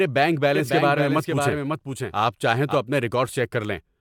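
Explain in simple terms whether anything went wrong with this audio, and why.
From 0.55 s to 2.75 s, the speech is joined by a second copy of itself trailing about half a second behind and somewhat quieter, so everything seems said twice. This is a doubled audio track, likely from the same sound being picked up again through a slower route. Unlike a room echo, the copy never fades away or sounds roomy; it stays clear and steady, and it begins and ends suddenly.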